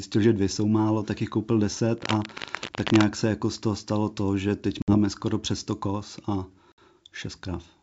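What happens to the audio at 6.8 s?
Packet loss on an ADPCM call: right after "koz a", about three packets went missing between 6.72 and 6.79 s, and the decoder filled the 60 ms gap with silence. With those packets gone, its adaptive predictor and step size no longer match the sender's, so after the sharp-edged hole the speech comes back slightly distorted, before the decoder realigns over the next few tens of milliseconds.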